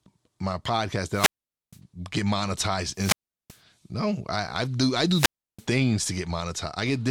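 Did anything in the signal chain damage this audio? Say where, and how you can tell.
Yes, there is wireless microphone squelch dropout on the analogue radio link, at 1.11–1.79 s, 2.94–3.59 s and 5.08–5.66 s. Each time the RF fades, hiss rises, then the receiver's squelch mutes for about 0.47, 0.38 and 0.33 s. A spectrogram shows a broadband noise smear before a blank column, and the waveform flatlines.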